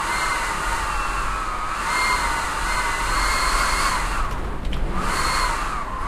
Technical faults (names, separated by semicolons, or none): none